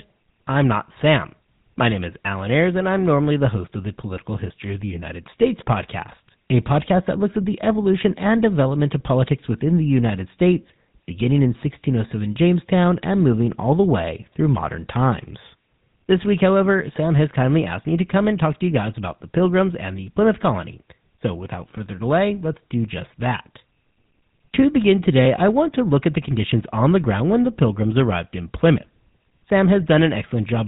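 Throughout the speech, GSM full-rate coding damage is plainly audible. The codec models the vocal tract and excites it with sparse regular pulses, which fits the 13 kbps full-rate standard. Voices sound buzzy and gravelly. Nothing passes above 3.8 kHz.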